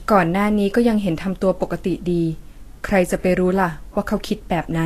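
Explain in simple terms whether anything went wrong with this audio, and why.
From start to finish the speech carries leftover artefacts, with nothing above about 14.2 kHz. This is low-bitrate audio saved at a high bitrate: it was likely squeezed hard once, then saved again as a larger MP3, which cannot restore what was lost.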